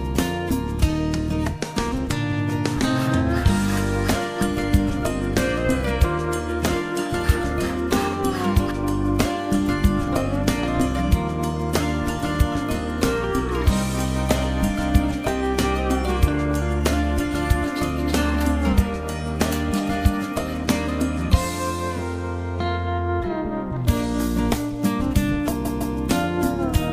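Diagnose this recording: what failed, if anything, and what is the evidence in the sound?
Repeated frames at the codec or storage stage. At 2.31 to 2.39 s a 78.4 ms block plays twice in a row, and at 25.64 to 25.96 s a 156.7 ms block plays three times, adding about 313.5 ms. Each block length points to a short run of compressed frames being written or sent again, so the decoder reproduces the same slice. On a spectrogram the identical pattern sits side by side; the waveform shows a copied segment butted against itself.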